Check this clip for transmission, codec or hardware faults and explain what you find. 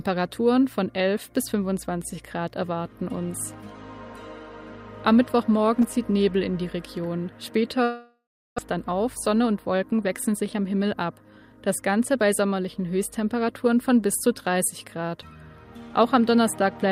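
Two network faults stand out in the sound, one straight after the other.

From 7.83 to 8.60 s, a long network dropout is the likely cause. With no packets arriving, the receiver stretches the last sound into a fading buzz, then about 0.37 s of silence, and about 0.4 s of audio is lost.

From 8.69 to 11.53 s comes a jitter buffer speed-up. The overfilled buffer is trimmed by cutting tiny pitch-period slices, removing about 0.3 s, so the sound runs roughly 11% faster at unchanged pitch.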